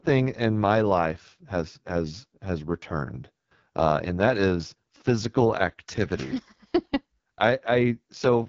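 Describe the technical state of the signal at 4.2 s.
At 4.2 s the speech is passing through an AMR wideband (HD Voice) codec, and this damage runs through the whole clip rather than just that moment. The codec models the voice as pulses driving a vocal tract filter up to 6.4 kHz, then fills the band above with shaped noise. The output stops near 7.4 kHz. The heavy rough, raspy texture fits the codec's lowest rate, around 6.6 kbit/s, where too few bits remain to model the voice accurately.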